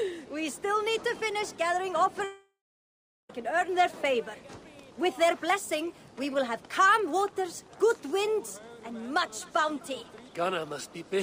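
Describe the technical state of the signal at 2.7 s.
At 2.7 s the signal sits inside a long network dropout running from 2.24 to 3.30 s, likely caused by audio failing to arrive. The receiver stretches the last sound into a fading buzz, then about 0.74 s of near-silence follows. Unlike a brief packet-loss click, sound resumes with the missing stretch skipped.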